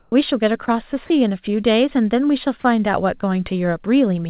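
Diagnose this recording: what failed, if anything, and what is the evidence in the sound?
Comfort noise in place of the background, 0.00 to 0.12 s, at the call-processing stage: the real background gives way to steady, featureless noise about 6 dB quieter, likely from discontinuous transmission.

Sound dropped by the voice detector, 0.66 to 0.68 s, also in call processing: about 10 ms of sound turns into steady noise, likely because the detector briefly judged it background. Nothing is heard above 4 kHz, which fits a narrowband call codec.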